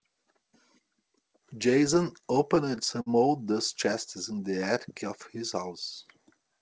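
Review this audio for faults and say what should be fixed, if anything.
Repeated stalls (stutter) from 1.94 to 3.09 s: the jitter buffer emptied eight times, and the receiver stretched the last sound to cover about 135 ms in total, with the longest gap at 53 ms. Nothing is lost, but the speech drags and stutters.

Jitter buffer slow-down from 4.34 to 4.75 s: repeated pitch periods add about 55 ms, so playback runs at 89% speed with unchanged pitch and drawn-out sounds.

The speech has no content above 8 kHz, which fits the G.722 call path.

To prevent both, stabilise packet delivery on the network path and give the jitter buffer a larger starting target so it has reserve before late packets arrive.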